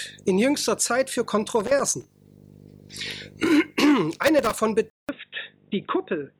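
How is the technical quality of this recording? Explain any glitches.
The recording has two kinds of fault: intermittent contact noise in two places, and a drop in quality near the end.

Loose connector crackle occurs from 1.60 to 2.05 s and again from 4.13 to 4.59 s. A worn or dirty contact opens and closes as it shifts, chopping the signal into scratchy bursts. Unlike digital clicks, these bursts are ragged and irregular rather than single, evenly spaced ticks.

At 4.9 s the audio drops out for about 0.19 s, then returns duller and boxier, with nothing above 3.8 kHz. It is also slightly quieter and carries a faint new background noise. This is likely an input switched to a poorer device. Unlike a plain low-pass filter, it shifts tone, level and noise floor together at one instant.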